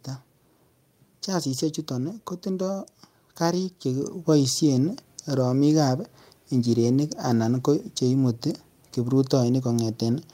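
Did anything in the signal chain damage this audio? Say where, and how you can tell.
Yes: call processing stepped microphone volume up at 4.02 s, one jump in input gain that lifts voice and background alike by about 5 dB.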